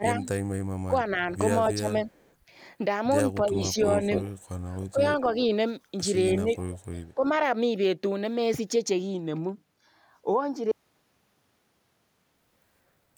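From 0.0 to 2.17 s the speech dips in short stretches by roughly 15 dB. This is speech suppressed in double talk, likely an echo canceller turning down the talker while both sides speak at once. At 2.15 to 2.34 s a faint delayed copy trails 282 ms behind, about 40 dB down. That copy is echo leak, likely loudspeaker pickup that the loudspeaker side's canceller failed to remove.

The suppression dips return at 3.41 to 3.75 s, by about 10 dB. A much stronger echo, 295 ms late and only about 5 dB below the speech, then runs from 4.01 to 5.43 s. A 15 dB dip falls inside it at 4.91 to 5.24 s.

From 6.4 to 7.24 s another dip of about 10 dB overlaps a further 295 ms echo at 6.58 to 6.85 s, about 25 dB down.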